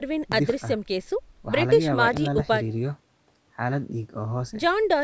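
At 0.32 to 0.53 s and again at 2.17 to 2.42 s there's a loud pop, each time a double pop roughly 15 dB above the speech, likely a voltage spike from a plug, switch or static discharge.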